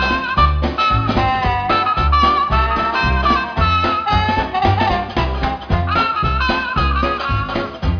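No technical faults are audible.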